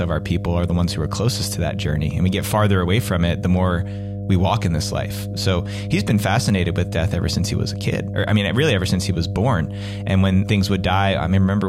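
From start to finish, mains hum sits under the speech: a steady 50 Hz tone, fairly loud and not far below the voice, from power-line current leaking in through a ground loop or nearby transformer. Unlike broadband rumble, it is one fixed pitch that never wavers.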